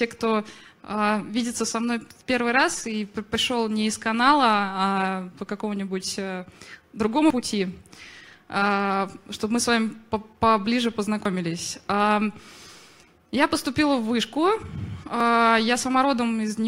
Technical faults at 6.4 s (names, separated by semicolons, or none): none